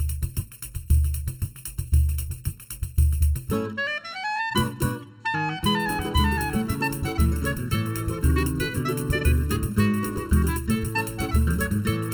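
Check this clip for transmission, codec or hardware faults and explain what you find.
One fault runs through the whole clip: channel delay (comb filtering). One channel arrives a fraction of a millisecond late before the mono sum, carving evenly spaced notches from around 700 Hz upward, leaving the sound hollow and phasey.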